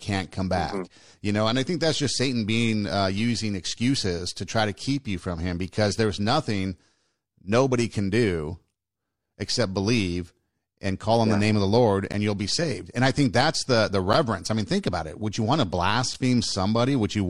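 Speech, with three short gaps between stream segments at 12.12 s (after "name of the lord"), 14.13 s and 16.14 s, spaced 2 s apart. The segment timestamps leave holes of about 7 to 10 ms, which the player fills with hard-edged silence. No audio is lost.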